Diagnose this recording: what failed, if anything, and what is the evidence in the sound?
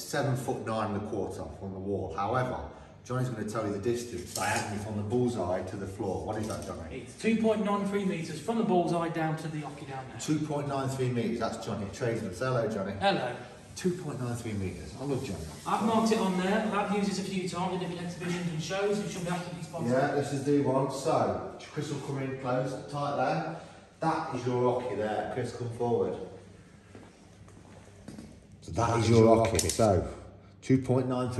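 From 27.68 to 29.86 s a doubled audio track appears: a full-band copy trails the original by roughly a tenth of a second, about 5 dB quieter, with no decay, starting and stopping abruptly. The cause is likely a slower second capture path mixed in alongside the direct one.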